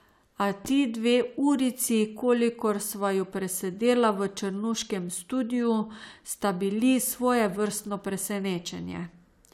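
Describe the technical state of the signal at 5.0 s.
At 5.0 s the speech signal is intact, with no audible fault at that point.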